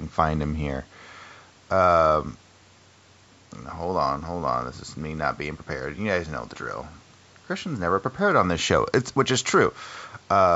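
Nothing stood out on listening to this speech recording, which has passed through ordinary call microphone processing with nothing above 8 kHz and its lowest bass trimmed as expected.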